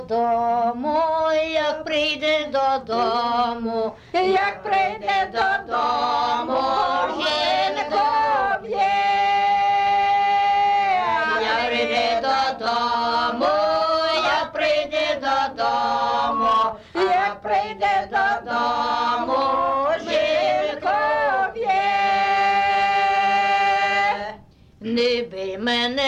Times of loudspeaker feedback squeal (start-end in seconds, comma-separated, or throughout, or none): 15.96-16.76